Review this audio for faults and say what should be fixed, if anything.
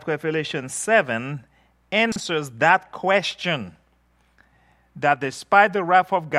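At about 2.12 to 2.20 s there's a short chunks-out-of-order glitch: one 40 ms block turns up a block late and plays after the one that should follow it. Nothing's missing, but the swap makes a brief jumbled blip with three hard joins. To prevent it, have the writer or receiver reorder blocks by sequence number or timestamp before playback instead of writing them in arrival order.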